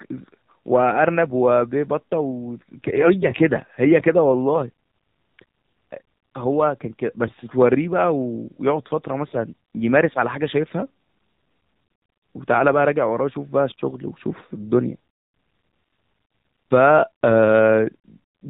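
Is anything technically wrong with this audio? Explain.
Yes, there are two faults.

Throughout, the audio has been through the AMR narrowband mobile codec. It resamples everything at 8 kHz, so nothing above 4 kHz survives, and each 20 ms frame rebuilds the speech from a vocal-tract filter driven by sparse pulses. The coding damage is plainly audible and fits a low mode of about 7.4 kbps. The voice sounds muffled, thin and buzzy, with a synthetic, slightly robotic edge.

From 2.96 to 3.13 s there are AMR bit errors. Over a weak link, bits in the less protected part of the frames arrived flipped, but the checksum on the essential bits still passed, so the decoder used the corrupted data. The damage spans several consecutive 20 ms frames, and the error rate was roughly a few percent. Misplaced excitation pulses and skewed gain and spectral values make the speech hoarse, scratchy and gargly for that moment, while its pitch and loudness stay roughly intact.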